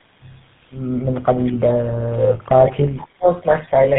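Tandem speech coding runs throughout: the speech sounds rough, muffled and warbly, with nothing above 3.8 kHz, which fits three GSM full rate passes re-coded across intervening links. Speech suppressed in double talk follows, from 1.97 to 3.28 s. The voice dips in pieces, about a second in all, falling by about 35 dB at its deepest, likely an echo canceller muting during simultaneous talk.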